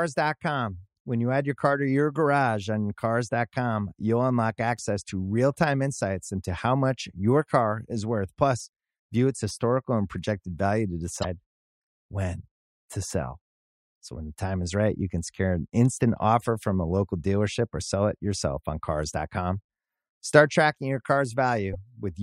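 At 6.57 s, between "real time insights into" and "much your car is", a brief glitch marks damaged data in a compressed stream. Two more follow, from 11.20 to 11.25 s just after "and projected value to", and from 21.73 to 21.75 s. Corrupted bytes made the decoder misread frames and lose sync while hunting the next header. On a spectrogram each shows as a thin vertical smear of scattered energy; the waveform shows a short, abrupt discontinuity.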